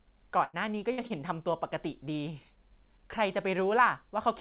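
At 0.44 to 0.56 s and again at 0.92 to 1.01 s, a burst of packet loss leaves a held, fading sound for about 90 ms and then 60 ms. About the same length of speech is skipped on resumption. On a spectrogram this shows as frozen, smeared content that dims, followed by an abrupt jump.

From 1.07 to 1.13 s, short concealed packet loss fills roughly 30 ms with synthesized continuation, heard as a brief wobble. The waveform shows a short, slightly irregular patch that blends back in.

Throughout, the spectrogram is empty above 4 kHz, which fits a narrowband call codec.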